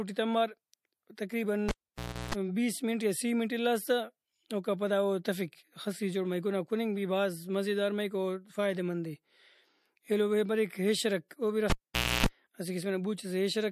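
Pre-echo first appears at 1.15 to 1.18 s: a hiss of about 22 ms swells just ahead of a sharp onset, sitting about 12 dB above the surrounding noise floor, and the attack itself lands softened. The coding blocks here span roughly 36 ms and never switch to shorter ones, so quantisation noise meant for the loud transient gets smeared across the quiet lead-in within the same block.

A cable pulled and plugged in follows at 1.69 to 2.35 s. A pop drops the signal out for about 0.61 s. During that gap a 60 Hz mains buzz runs for about 0.34 s as a loose tip makes partial contact, and a second pop marks the return. Within that same stretch, pre-echo recurs at 1.96 s as a 15 ms hiss about 14 dB above the floor before a transient.

Pre-echo strikes again at 11.29 to 11.31 s, the strongest of the three: a 21 ms smear of hiss about 15 dB up, blunting the attack it precedes.

A second cable pulled and plugged in spans 11.70 to 12.26 s. 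It opens with a pop and drops out for about 0.52 s, including roughly 0.29 s of 60 Hz buzz, then closes with another pop as the signal comes back.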